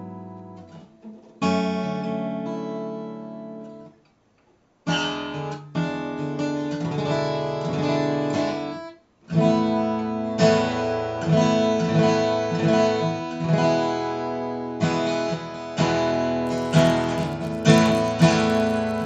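From 16.46 s to 19.05 s, the resampler restarted on every block. Each 10 ms block was converted alone, in a 16 kHz to 48 kHz conversion. Its edges lacked real neighbouring samples. The resulting edge errors form a 100 Hz buzz riding on the sound.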